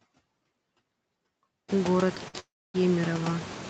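Noise suppressor artifacts run through the whole clip. The suppressor pulls down bands it judges to be steady noise, by about 17 dB. When the room noise rises by about 22 dB around 1.5 s, the leftover noise pumps between and under the speech.

At 2.28 s comes a short stall from a late packet. A packet arrived late and the jitter buffer ran dry. The receiver held the last sound for 56 ms until it turned up. It is heard as a brief smeared hold with a slight buzz or dip, and nothing is lost.

From 2.40 to 2.76 s there is a call audio freeze, likely from packets held up in transit. The last sound stretches into a fading buzz or hiss and then about 260 ms of silence. The whole gap is 345 ms. Speech resumes where it stopped, with nothing missing.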